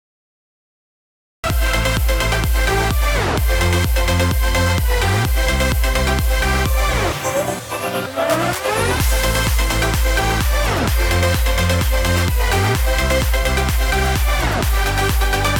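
The audio has a cut-off start: digital silence until 1.44 s, then sound enters mid-event with no attack, unlike a fade-in, because capture began late.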